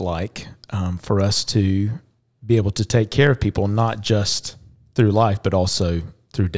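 Nothing in this bit of speech points to a technical fault, so there's no event worth flagging anywhere along the way.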